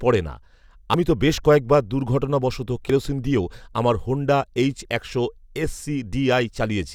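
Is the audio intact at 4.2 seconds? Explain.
Yes, the speech plays through cleanly at 4.2 seconds, with no dropout, click, distortion or other fault at that moment.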